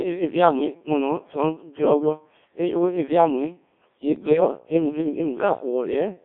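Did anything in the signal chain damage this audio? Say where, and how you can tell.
Yes. The codec stage is a Codec 2 vocoder throughout. The audio sounds robotic and buzzy, limited to 250 Hz to 3.6 kHz. This is sine-wave resynthesis, which fits about 1.3 kbit/s.

From 4.16 to 4.40 s, bit errors on digital voice radio hit the radio link. Pitch, level and tone jump into warbles. A few percent of flipped bits corrupt whole frames.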